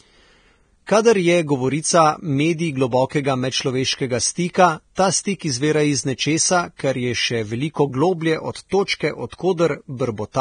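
Throughout the speech, a heavily starved transform codec has stripped the signal down. The pattern is most likely Vorbis compression, at a rate that fits something around 23 kbps. The encoder cuts everything above 9.7 kHz and quantises the remaining treble so coarsely that fine detail turns into noise of similar energy. The sound comes out hissy and grainy, voiced tones sound roughened, and consonant onsets lose their edge.

From 4.95 to 4.97 s, just after "medčloveškega stika", a sharp onset lands late in a coding block. The quantisation noise meant for the loud part spills back across about 23 ms before it, producing pre-echo: a brief hiss ahead of the attack, which itself sounds softened. The same happens from 8.85 to 8.88 s, right after "še veliko globlje od", this time spreading about 26 ms and smearing that onset.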